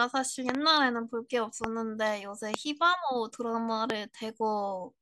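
Speech carries loud pops: a double at 0.49–0.57 s, then single ones near 1.64, 2.54 and 3.90 s, well above the voice. Each is a vertical broadband stripe and a sharp waveform spike, likely from an electrical glitch.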